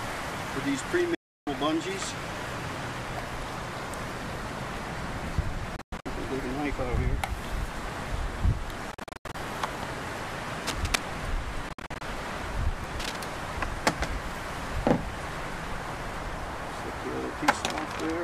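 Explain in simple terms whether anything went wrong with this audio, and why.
The sound cuts out four times, likely Bluetooth dropouts where data didn't reach the headphones in time. There's a solid gap from 1.15 to 1.47 s, then stuttery, broken gaps at 5.76–6.06 s, 8.92–9.35 s and 11.69–12.01 s.

Cable scratch noise appears at 10.67–10.99 s, about as loud as the audio itself, and more quietly at 13.00–13.16 s. It sounds like rough scratching, likely from a worn cable or plug being moved.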